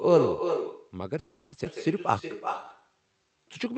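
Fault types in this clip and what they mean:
Echo with no canceller: Throughout the speech, every phrase is trailed by a fainter, thinner copy arriving roughly a third of a second later and sitting about 6 dB below the direct sound, so syllables smear into their own shadow. The far end is playing the call through a loudspeaker, its microphone picks that playback up, and with no echo canceller in the chain the talker's own voice returns after the network round trip.
Call audio freeze: From 1.19 s to 1.54 s the speech stops moving forward and the last sound is drawn out as a fading continuation for about 330 ms, with no true silence, before the talk resumes exactly where it left off, so nothing is lost but the rest of the clip now runs later. This is likely packets stalling in transit and the jitter buffer running dry, with the receiver concealing the gap.
Skip ahead: At 1.64 to 1.67 s the speech lurches forward with only a tiny seam of about 10 ms, and around a fifth of a second of speech is simply absent, the sounds on either side butted almost directly together. 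A stretch of audio was discarded, either lost on the way or dropped by the jitter buffer when it overflowed, while later audio was already queued and ready to play.
Jitter buffer slow-down: From 2.12 s to 3.65 s the speech drags, running at about 87% of normal speed while keeping its pitch, with vowels and pauses stretched and a faint warble in places, about 214 ms added in all. The jitter buffer was short of reserve or had raised its target delay, so the receiver repeated individual pitch periods and slices of pauses to rebuild it, on top of the Opus coding that limits the audio to about 8 kHz.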